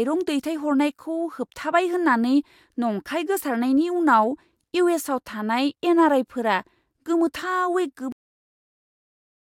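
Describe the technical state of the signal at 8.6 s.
At 8.6 s there is only dead digital silence: the speech stops abruptly mid-sound at 8.12 s and never decays, staying flat through 9.41 s. This is a cut-off end, where the final buffers were never written or played, so the recording simply ends early.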